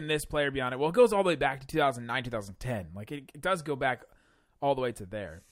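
No technical faults can be heard anywhere in the speech recording.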